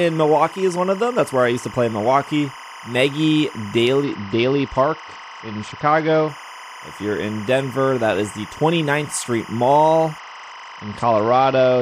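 Timecode bleed runs through the whole clip: linear timecode from an adjacent track or cable has leaked into the speech path. The code's square wave flips between two tones near 1 kHz and 2 kHz, and its 25-frames-per-second structure gives a regular, steady chirping warble sitting roughly 20 dB under the speech. It never drops out or changes character, so it behaves as a fixed layer behind everything else.

A Bluetooth SBC bit pool drop hits from 4.04 to 6.29 s and again from 10.18 s to the end of the clip at 11.82 s. In both stretches the link was congested, and the sound points to the bit pool being cut from around 31 to around 9, roughly 72 kbps. With so few bits the upper sub-bands lose their allocation, so the treble goes dull, and the remaining bands are quantised coarsely enough to add a gritty noise to the speech.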